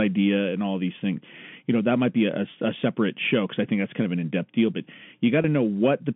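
At 5.42 to 5.44 s, just after "in depth deal but", packet loss with pitch repetition fills a gap of about 20 ms, which fits one lost packet, with the last pitch period repeated. It sounds briefly held and buzzy. The waveform shows identical repeated cycles, and the spectrogram shows frozen harmonics inside the 150 Hz to 3.4 kHz telephone band.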